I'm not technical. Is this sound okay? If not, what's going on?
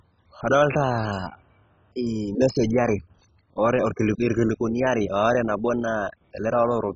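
No. Throughout the speech, nothing reaches above 7.4 kHz, so it sounds dull and gurgly, likely from heavy MP2 compression discarding upper bands and roughening what remains.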